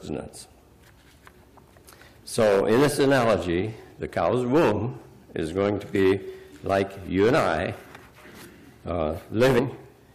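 At 9.58 to 9.60 s, compressed frames are skipped: a run of encoded frames never reaches the output, either missing from the stream or rejected by the decoder as corrupt. The audio jumps forward by about a tenth of a second, around five frames of 23.2 ms each.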